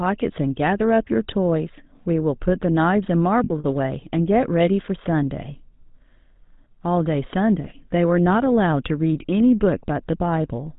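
The speech runs through the GSM full-rate codec throughout. Its vocal-tract model is driven by a sparse regular-pulse excitation, and it passes nothing above 4 kHz, at the codec's 13 kbps rate. The result is plainly audible: a dull, band-limited sound with a buzzy, gravelly roughness.

From 3.44 to 3.65 s, lost GSM frames, about 120 ms in total, are scattered across a 200 ms stretch, the longest run being roughly 70 ms. Each gap is filled by repeating the settings of the last good frame, so the sound briefly sticks in a rough, metallic ring.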